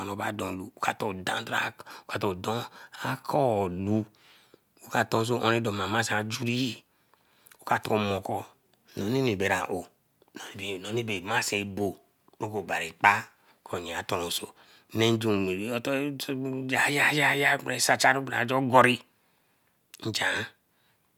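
No technical faults are audible anywhere in the recording.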